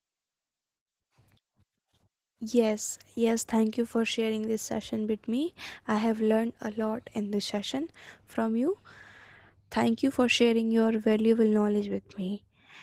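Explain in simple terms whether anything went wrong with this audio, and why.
Yes, something went wrong: the speech was squeezed too hard by Opus voice compression, which models the lower part of the voice and roughly codes the highs. Throughout the clip, the speech sounds plainly hoarse, a little muffled and slightly robotic.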